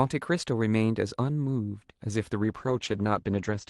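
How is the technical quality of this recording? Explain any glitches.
The recording has one clear glitch near the end, a call bitrate drop. From 2.43 s to the end of the clip, about 1.27 s, the call's bandwidth estimate collapsed and the Opus encoder was forced to spend far fewer bits. That fits a fall from roughly 48 to 12 kbps. Coarser coding makes the speech rough and watery, and the audio bandwidth narrows from 12 kHz to 8 kHz, dulling the top end until the clip stops.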